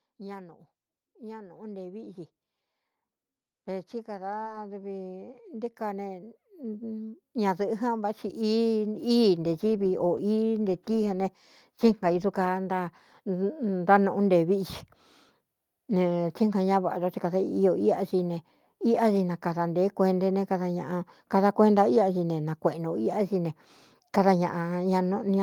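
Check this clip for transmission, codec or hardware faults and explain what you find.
Two faults turn up in this speech clip: automatic gain rising twice, and one short concealed packet loss.

Automatic gain rising happens from 0.16 to 2.2 s, then again from 3.64 to 9.68 s. The gain control judged the input too quiet and eased its level up, by about 4 dB the first time and about 14 dB the second, so voice and background swell together.

A short concealed packet loss sits at 4.43 to 4.47 s, during that second gain rise. About 20 ms of audio never arrived in time, and the receiver patched roughly 14 ms by extending the preceding sound before blending back, leaving a brief smear or wobble.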